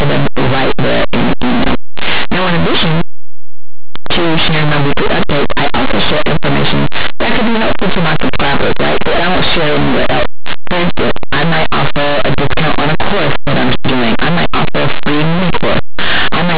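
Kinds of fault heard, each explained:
Linear audio read as companded: plain 8-bit samples were decoded as mu-law codes, so small values on one side of zero jump to the largest outputs, making the speech harshly distorted throughout.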